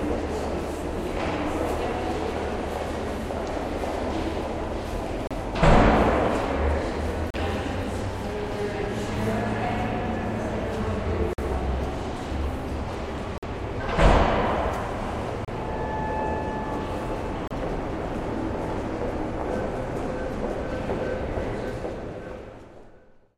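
Short silent holes with hard edges cut the sound at 5.27, 7.30, 11.33, 13.38, 15.45 and 17.48 s. Each lasts 31 to 48 ms. This is a gap between stream segments. The timestamps of adjacent 2-second segments fail to meet, and the player fills the gap with silence. No audio is lost.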